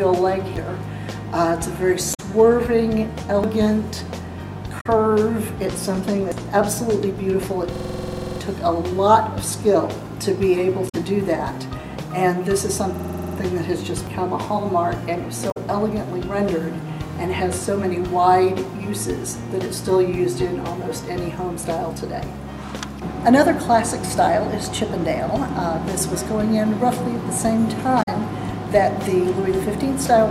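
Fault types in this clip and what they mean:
dropped buffer (overrun): Samples were likely overwritten before the program read them, so about a tenth of a second vanishes and the audio jumps ahead.
damaged data in a compressed stream: Corrupted frames throw the decoder out of sync while it hunts for the next header, giving brief glitches lasting about 70 ms each.
system hang loop: The system froze while hardware kept replaying a 46 ms piece, fitting a 2048-sample buffer, producing a rapid 21.5 Hz stutter, nine to fourteen times.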